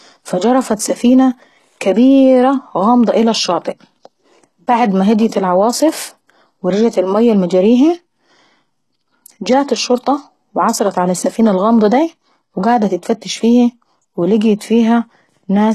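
Throughout the speech, the signal has likely passed through HE-AAC compression at a rate consistent with about 16 kbps. Only the lower spectrum is coded, and the treble is regenerated from copied lower bands. Nothing reaches above 12.3 kHz, and s sounds turn gritty and metallic.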